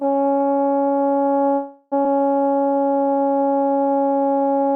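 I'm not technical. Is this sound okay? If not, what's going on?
No, there are three glitches in this music.

From 1.55 to 1.94 s the sound stalls into a fading buzz or hiss, likely a call audio freeze: the network held up delivery, then playback resumed where it stopped.

At about 2.04 s there's a skip ahead: roughly 0.3 seconds of music goes missing, and the two sides are stitched together almost seamlessly.

From 2.43 to 4.08 s a jitter buffer slow-down drags the music to about 85% speed at the same pitch, stretching it by a quarter second so the receiver could rebuild its reserve.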